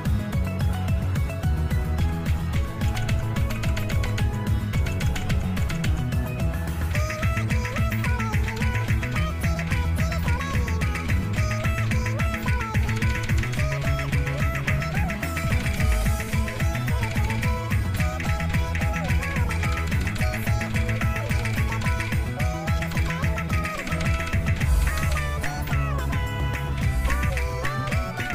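Nothing stood out on listening to this audio.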